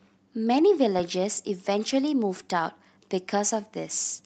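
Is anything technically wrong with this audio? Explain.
Yes. There is clock drift between sender and receiver throughout the clip. The sender's clock runs roughly 3 percent slow, so the receiver's jitter buffer keeps draining. On a waveform, small seams and slightly stretched stretches appear at uneven spacing rather than on a steady grid.

Repeated timing corrections run from 0.12 s to 3.82 s. The receiver repeats short pieces to stay in step, which slows playback to 97 percent and adds about a tenth of a second overall. A spectrogram shows brief duplicated slices at the splice points.

The audio passed through an Opus call path, which accounts for the spectrogram going empty above 8 kHz.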